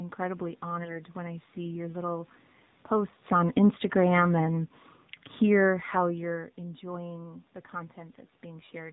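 Throughout, the speech carries plainly audible AMR narrowband mobile codec damage. Nothing above 4 kHz survives, and the voice has the buzzy, synthetic edge of a vocal-tract model driven by sparse pulses. The degree of coarseness fits a low AMR-NB mode around 7.4 kbps.

From 0.84 to 1.02 s, AMR bit errors turn the voice hoarse and gargly while pitch and level roughly hold. Flipped low-priority bits misplace the excitation pulses and skew the finer gain and spectral values. The span fits two damaged 20 ms frames at a heavy error rate.

Between 2.91 and 4.77 s, automatic gain falling pulls the level down by about 4 dB. The control judged the input too loud, or its background too strong, and eased its gain gradually, so voice and room background sink together. This is separate from the talker's own movement near 3 s.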